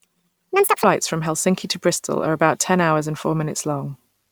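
From the start to 0.84 s the speech comes out high and hurried, pitched up by about ten semitones and running at 1.87 times its proper rate. This is a section at the wrong speed, likely from playback or editing against a mismatched clock.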